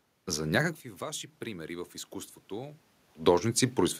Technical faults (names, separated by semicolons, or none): none